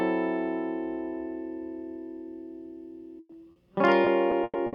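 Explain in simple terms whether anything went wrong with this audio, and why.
Call audio freeze, 3.19 to 3.39 s: the music briefly stalls into a fading buzz for about 100 ms before resuming. The likely cause is delayed network packets draining the receiver's buffer. The player stretched the last sound to bridge the wait, then carried on slightly later with almost nothing lost.

Short concealed packet loss, 3.52 to 3.59 s: a quick smear or wobble. A few hundredths of a second never arrived in time, so about 40 ms was patched by continuing the previous sound, while roughly 60 ms of real music is simply gone.

Repeated packet loss (robotic sound), from 4.05 s to the end: four separate dropouts, the longest 110 ms, close together. Each is patched with continued sound, about 28% of this stretch, and 120 ms is missing, so the music turns choppy.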